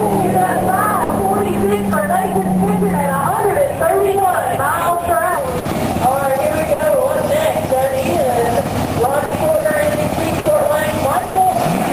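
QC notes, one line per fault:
1.03–1.12 s, 5.59–5.68 s, 6.73–6.82 s, 9.25–9.34 s, 10.39–10.48 s, 11.29–11.38 s: burst of packet loss. Each time, about 60 ms of fading held sound bridges a gap, then about 60 ms of audio is skipped.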